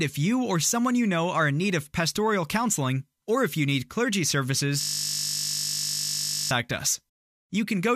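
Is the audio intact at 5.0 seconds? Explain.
No. From 4.81 to 6.51 s, just after "if you need clergy", the sound turns into a steady 50 Hz buzz. This is a system hang loop: the system froze while the hardware kept replaying one 20 ms buffer, some 85 times over.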